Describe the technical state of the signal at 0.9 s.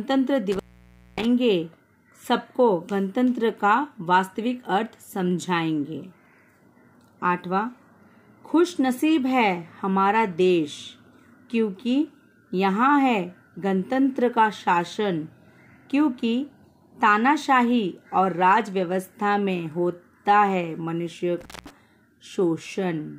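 At 0.9 s the signal sits inside an intermittent contact fault running from 0.52 to 1.25 s. A loose connection in the cable or plug briefly breaks the circuit, and here the line stays open for about 0.58 s. At that moment the sound has dropped out or broken up, leaving only a faint hiss where the audio should be, with crackle marking the edges of the gap as the contact breaks and reconnects.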